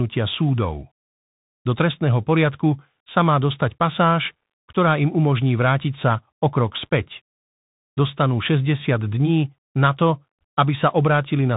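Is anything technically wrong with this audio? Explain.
Yes. Throughout the speech the audio has gone through the Bluetooth CVSD headset codec. This narrowband link encodes each sample as a single up-or-down bit with an adaptive step, which fits a 64 kbps stream, and it passes nothing above about 3.8 kHz. Because the step size cannot keep pace with loud, rapid high-frequency movement, those moments distort, s sounds come out scratchy, and a granular hiss sits under the speech. The damage is plainly audible.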